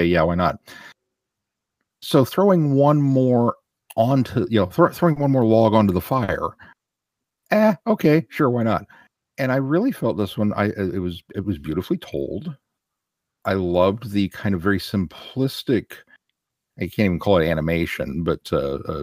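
At 5.12 s the speech hangs briefly, until 5.19 s. This is a short stall from a late packet. The next packet was not there in time, so the jitter buffer ran dry. The receiver stretched the last sound for about 40 ms, then resumed where it stopped. Nothing is lost. The sound is just held slightly too long, with a faint buzz or dip. The same stall recurs from 6.24 to 6.31 s, again 40 ms. Each stall pushes the playback delay 40 ms later.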